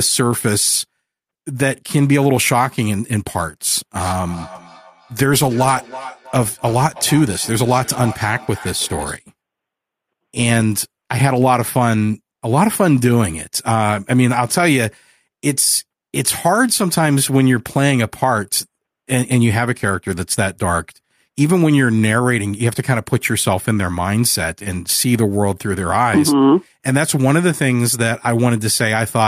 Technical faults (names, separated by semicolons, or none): feedback echo between two devices